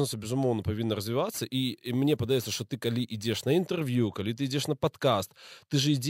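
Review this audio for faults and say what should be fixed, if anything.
From 1.34 to 3.62 s, crude rate conversion that repeats samples, fitting a 32 kHz to 44.1 kHz step, adds inharmonic fizz that follows loud, bright speech, unlike steady hiss. Resample with a proper band-limited, anti-imaging filter, not sample repetition.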